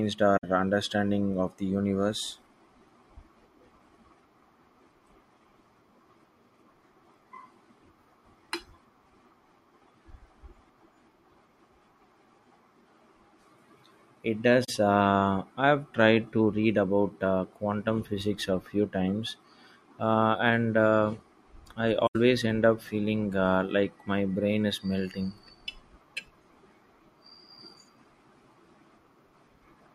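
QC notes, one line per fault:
0.37–0.44 s, 14.64–14.69 s, 22.07–22.16 s: AAC frame loss with muting. The decoder zeroed the spectrum of missing frames, fitting two to four frame losses. Overlapping windows fade the speech out and back in, leaving soft-edged silent gaps of about 64, 43 and 85 ms.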